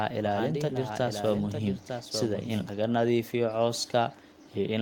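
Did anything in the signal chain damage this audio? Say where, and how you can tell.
Yes. A doubled audio track runs from the very start of the clip to 2.7 s. A second full-band copy of the speech trails the original by about a second, roughly 5 dB quieter, with no decay or room colour, so it is not an acoustic echo. It cuts off abruptly at 2.7 s, right after "waxaan dhihi". This likely happened at the capture or editing stage, where a slower second path or a misaligned edit laid two copies of the audio out of step.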